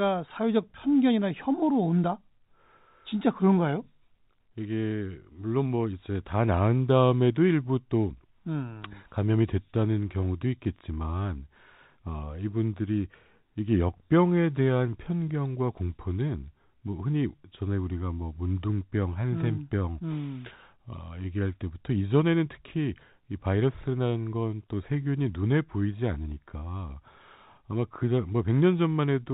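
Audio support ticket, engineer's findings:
No fault found; G.711 telephone path as expected.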